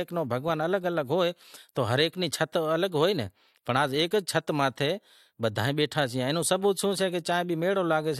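No technical faults can be heard in this speech recording. No moment stands out as a technical problem.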